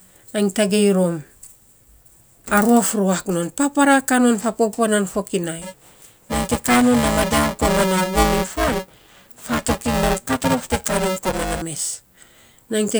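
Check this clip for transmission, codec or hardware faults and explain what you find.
One hardware fault is present: buffer tearing from 5.62 to 11.62 s. The write and read positions in the ring buffer have crossed, so around two fifths of each period replays audio from roughly 7 ms earlier. The resulting hard splices give a robotic 375 Hz buzz over the speech, consistent with a 128-sample buffer.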